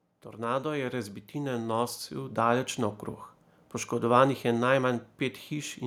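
From 0.06 s to 3.06 s there is automatic gain rising. The automatic gain control judged the incoming level too low and stepped its gain up gradually rather than all at once, adding about 11 dB over those three seconds. The result is a slow, steady swell in loudness across the opening of the speech. The gain applies to the whole signal, so any background noise rises along with the speech instead of staying at a fixed level beneath it.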